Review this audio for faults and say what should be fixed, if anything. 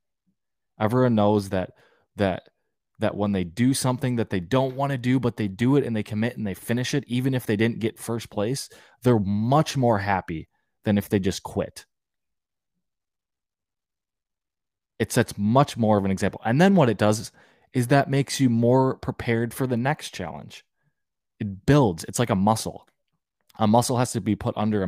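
Nothing here needs fixing, as no technical faults turned up anywhere in the recording.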